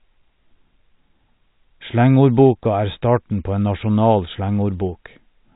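Speech over telephone-band coding, with no audible faults.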